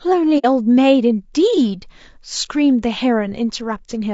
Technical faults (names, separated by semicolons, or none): low-delay AAC compression; AAC frame loss with muting